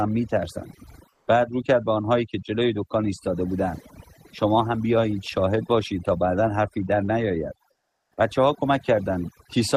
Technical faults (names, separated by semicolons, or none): overdone noise removal; comfort noise in place of the background; onset clipped by the voice detector